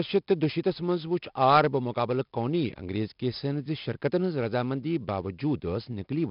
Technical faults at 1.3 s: 4-bit ADPCM compression

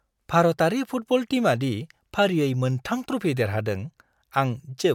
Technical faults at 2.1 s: none

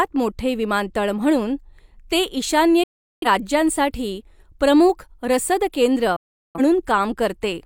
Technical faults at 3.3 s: digital broadcast dropout

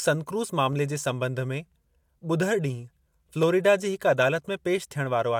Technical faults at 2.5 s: clock drift buffer slips

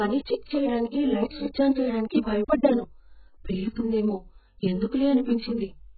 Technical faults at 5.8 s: AAC compression

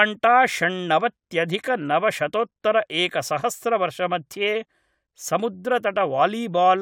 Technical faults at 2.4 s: none

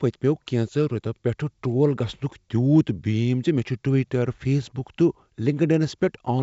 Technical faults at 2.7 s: none

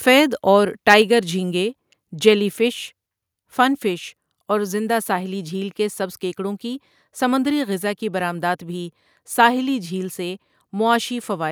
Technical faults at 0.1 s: microphone overload

